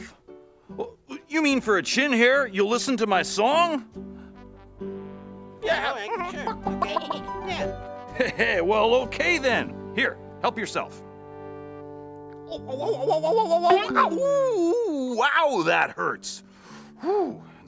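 No technical faults can be heard anywhere in this recording.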